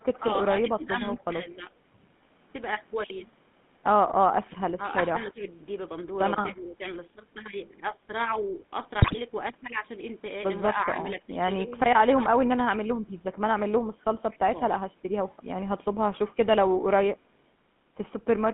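The whole clip carries the sound of the GSM full-rate codec. The speech is confined to roughly 150 Hz to 3.5 kHz, so it has no air or sparkle. A rough, buzzy grain sits on every voiced sound. That texture points to the old 13 kbps full-rate coder. It rebuilds the voice from a vocal-tract filter fed by a coarse, thinned-out pulse excitation. The damage is plainly audible throughout.

From 0.13 to 1.21 s there is an echo leak. A faint second copy of the speech trails the original by about 246 ms, at about 30 dB below it. This is likely a loudspeaker on one side whose echo canceller let some of its own playback back into the line.

Overlapping that, from 0.18 to 1.7 s, there is speech suppressed in double talk. The voice dips in short patches totalling about half a second, by up to about 15 dB. The level sags in those moments. The likely cause is an echo canceller that could not tell the talker from the echo while both sides spoke, so it turned everything down. 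The same happens from 4.77 to 6.82 s, this time over roughly a second in total.

From 9.0 to 9.17 s come GSM bit errors. The voice breaks into squawks, pops and a gargling smear. That fits a burst of bit errors of around 4% across several consecutive frames. Corrupted filter, pitch and gain values bend the spectrum and jolt the level frame by frame.

At 14.31 to 14.37 s the 246 ms echo leak returns briefly, again about 30 dB down. Then from 14.48 to 14.61 s the speech is suppressed in double talk once more. The voice drops by up to about 15 dB for around 150 ms.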